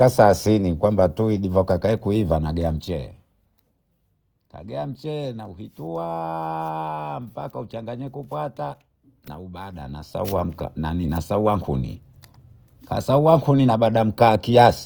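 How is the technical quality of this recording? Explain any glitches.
The recording has two audible problems: a grainy codec coloration throughout, and a brief zipping artefact during one level change.

Opus compression, throughout: The speech sounds rough and grainy with no muffling, likely from Opus in its CELT music mode at a low bitrate, around 24 kbps.

Zipper noise, 2.62 to 3.39 s, just after "kwamba tuwi divaka kuiva": A level drop of about 10 dB happens in unsmoothed steps, roughly a hundred per second, producing a fast ticking buzz.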